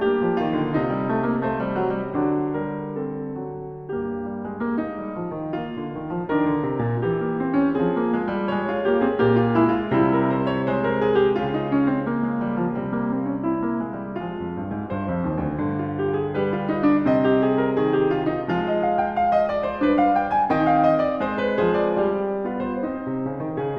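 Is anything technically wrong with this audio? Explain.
No, the music comes through as a continuous, steady signal with no technical faults to be heard anywhere in it.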